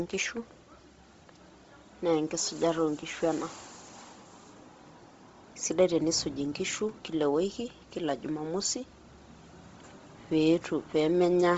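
Throughout the speech, the band stops sharply near 7.7 kHz, and the top octave carries a breathy, grainy hiss rather than falling silent, which is likely Bluetooth LC3 compression with heavy noise-filling. That synthetic hiss sets it apart from a clean low-pass, and the damage fits a low bitrate around 24 kbps with 7.5 ms frames.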